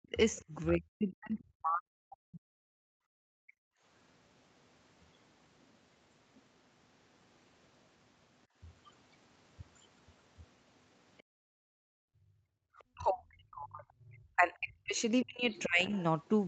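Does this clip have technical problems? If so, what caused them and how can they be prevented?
Yes. The clip has three kinds of fault, all tied to echo cancellation on a call.

Speech suppressed in double talk: from 0 to 2.71 s, the talker's level dips and breaks up for about two seconds in total, falling by roughly 40 dB at its deepest. From 12.93 s to the end, it drops again by roughly 35 dB. The likely cause is that both ends spoke at once, and the echo canceller could not separate the local talker from the loudspeaker echo, so it attenuated both. Prevention: use a headset or a full-duplex echo canceller with better double-talk detection, so the local talker is not attenuated along with the echo.

Other side's voice leaking through: a second voice is audible from 0.35 to 0.69 s at about 25 dB below the talker, as a brief scrap from 11.18 to 11.23 s at about 40 dB below, and from 14.98 s to the end at about 25 dB below. 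This is likely far-end audio from the loudspeaker that the canceller left in the microphone signal, and it overlaps the suppressed stretches at each end. Prevention: lower the loudspeaker volume or move to a headset, and let the canceller converge before the conversation starts.

Background gated by the echo canceller: the room sound drops out from 2.99 to 3.84 s, about one second in total and by about 38 dB at its deepest. Between 8.47 and 12.65 s, it drops for about 1.5 s in total, by about 37 dB, then returns each time the suppression releases. The canceller is clamping the microphone hard while the loudspeaker plays. Prevention: reduce acoustic coupling, or use gentler residual-echo suppression with comfort noise, so the background stays continuous.

Across the whole clip, nothing is heard above 8 kHz, which fits wideband Opus at around 32 kbps on the call path.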